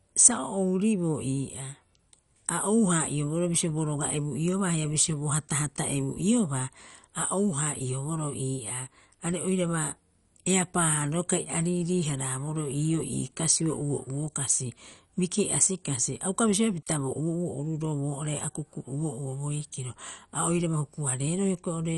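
Speech, and the whole thing sounds squeezed through MP2 compression, likely at a low bitrate, something like 48 kbps. Nothing survives above about 11.3 kHz, so the top end is dull, and the damage is plainly audible all the way through: a gurgly, grainy texture where the upper sub-bands run short of bits and flicker in and out, with what's left coarsely quantised. It's that low-rate digital radio sound.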